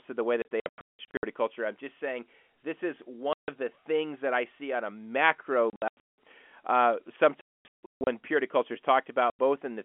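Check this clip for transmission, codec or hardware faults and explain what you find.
The clip has one fault: packet loss filled with silence, in five places. From 0.42 to 1.23 s, between "to the way" and "culture I'm just saying", about 0.51 s of sound drops out in scattered holes, the longest 0.18 s. At 3.33 to 3.48 s there is a single 0.15 s hole. From 5.70 to 6.17 s, right after "see on a macro", 0.36 s goes missing, again with runs up to 0.18 s. From 7.41 to 8.07 s, 0.57 s is lost, with the longest gap at 0.24 s. At 9.30 to 9.39 s, just after "purity culture is", a 0.09 s hole appears.

Packets never reached the receiver, and it played digital silence in their place. Every gap is a multiple of 30 ms, which fits 30 ms packets. The speech is chopped by dead holes with abrupt edges. That is what separates this from concealed loss, which would smear, repeat or fade the surrounding sound across the gap rather than cutting to silence. 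The telephone path itself can be heard as narrowband, roughly 250 Hz to 3.4 kHz.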